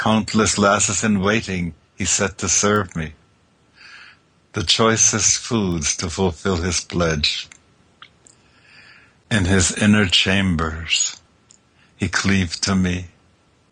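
Sharp isolated ticks at 2.76 s (about -12 dBFS) and 5.72 s (about -18 dBFS) are bit error spikes: single samples flipped by a power of two, then restored.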